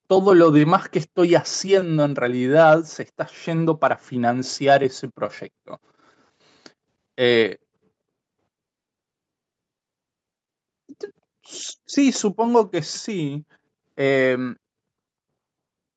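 No technical faults occur at any point in the speech; its top end stops around 8 kHz, as expected from an Opus call path.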